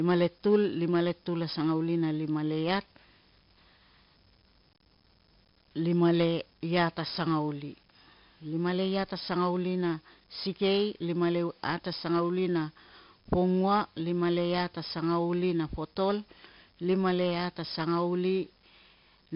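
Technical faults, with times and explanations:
throughout: 4-bit ADPCM compression, heavy. Gritty hiss clings to every loud stretch of speech, sharp onsets distort, and nothing reaches above 5.3 kHz. Each sample is a coarse 4-bit step from a prediction, so noise tracks level; the dull top fits roughly 11 kHz sampling.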